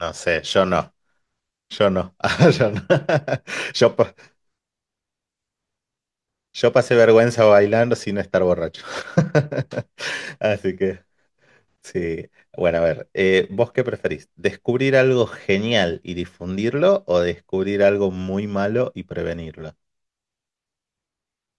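No technical faults can be heard anywhere in this speech recording. There is nothing to place in time and nothing to trace to a cause.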